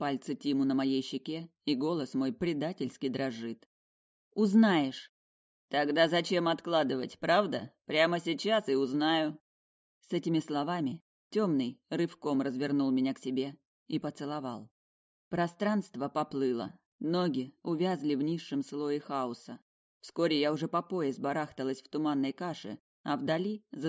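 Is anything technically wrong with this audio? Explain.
No, nothing technically wrong stood out on listening to this audio.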